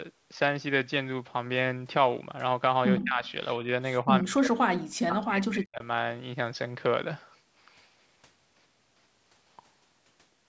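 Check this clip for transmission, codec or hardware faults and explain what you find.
Two kinds of fault are audible, both pointing to a hands-free call in which both ends talk over each other.

Speech suppressed in double talk: the speech sinks sharply from 2.98 to 3.24 s, by about 25 dB. It dips slightly from 3.61 to 3.68 s, then from 4.04 to 5.83 s fades almost to nothing for over a second. The likely cause is an echo canceller that, with both sides active, couldn't separate its own talker from loudspeaker echo and turned everything down.

Echo leak: from 3.26 to 3.31 s a faint delayed copy of the speech slips through, trailing the original by 110 ms and sitting very low, about 35 dB beneath it. It is likely residue that the loudspeaker end's canceller failed to remove from its microphone pickup and sent back down the line.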